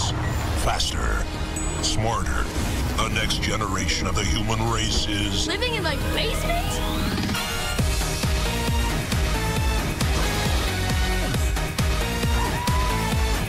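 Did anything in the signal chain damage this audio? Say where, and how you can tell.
No, nothing along the chain seems to have harmed this audio, so there's no stage to point at and nothing to trace.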